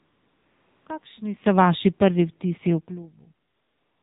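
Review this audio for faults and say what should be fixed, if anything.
The AMR narrowband mobile codec carried the whole clip at a low mode, which fits about 7.4 kbps. Everything above 4 kHz is gone, and the speech sounds plainly buzzy and synthetic. Use a wideband codec or a higher AMR mode.

AMR comfort noise filled the pauses where no speech frames were sent from 0 to 0.86 s and from 3.48 s to the end. The real room noise switches to a smooth, steady synthetic hiss. Tune or disable the silence detection so the genuine background passes through.

Automatic gain falling: the gain control judged the input too loud or its background noise too strong and eased it down by about 5 dB between 1.42 and 3.3 s. The speech and its background sink together. Set a lower, fixed input gain so the gain control has nothing to correct.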